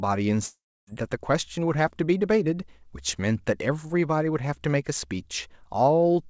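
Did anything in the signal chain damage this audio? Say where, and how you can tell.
Yes, at the network stage. Between 0.46 and 0.89 s the speech turns into a fading buzz that extends the last sound, then 290 ms of near silence, and resumes with 420 ms lost. This is likely a long network dropout, with the receiver concealing missing packets.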